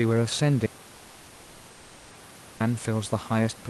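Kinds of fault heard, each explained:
Audio dropout to silence: at 0.67 s the speech cuts off into silence, with even the room noise gone, and returns at 2.6 s. That is nearly 2 seconds of lost audio, likely from the input link dropping while the recording kept writing silence.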